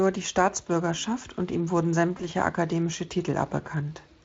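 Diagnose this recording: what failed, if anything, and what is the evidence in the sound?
The network stage failed, showing up as VoIP packet loss concealed by the speech codec. At 2.17 s the speech briefly smears into a stretched, buzzy or noise-like sound that decays and recovers by 2.25 s, a disturbance of about 80 ms that points to a single lost 20 ms frame. The Speex decoder filled the gap by repeating its last pitch and filter with falling gain. Because each frame depends on the previous one, the damage outlasts the missing packet.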